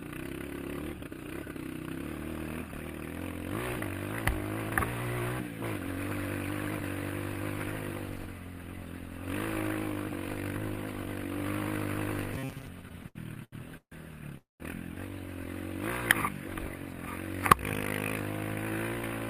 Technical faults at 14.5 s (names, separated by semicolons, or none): call audio freeze